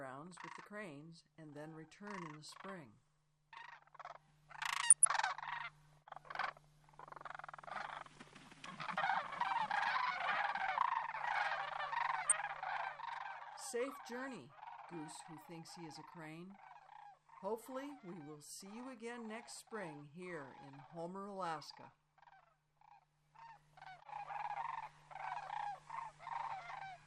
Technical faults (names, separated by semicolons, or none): MP2 compression; DAB burbling